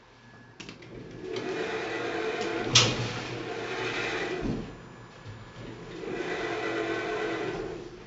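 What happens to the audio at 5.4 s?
At 5.4 s a USB whine is present, running from 4.48 s to 7.90 s. Current drawn by the USB bus in 1 ms frames has leaked into the audio through the power or ground path. The result is a steady 1 kHz tone, strongest at that fundamental and sitting about 30 dB below the signal. It holds a fixed pitch under the sound for the whole span.

The 4-bit ADPCM compression that runs through the entire clip also affects this moment. Each sample is coded as a coarse 4-bit step from a predicted value, and the step size adapts as the signal changes. The resulting error is heavy here, heard as gritty hiss that rises and falls with the loudness of the sound. Nothing is present above 7.8 kHz, which points to a sample rate near 16 kHz and dulls the top end.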